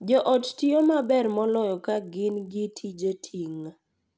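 A speech recording carrying a resampler restarted on every block, audible from start to finish as a 50 Hz buzz riding on the sound. The conversion from 24 kHz down to 16 kHz was done on 20 ms blocks independently, so each block edge carries a small error, fifty times a second. Unlike mains hum at the same rate, this buzz disappears in pauses and tracks the signal. Unlike dropout clicks, it stays perfectly regular.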